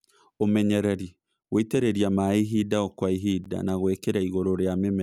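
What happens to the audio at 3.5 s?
The speech was delivered in 2-second chunks, and at 3.44 s, just after "ihinda o kwa", 12 ms of silence was left before the next chunk. No sound is lost, but the flow stops in a brief hole, a gap between chunks.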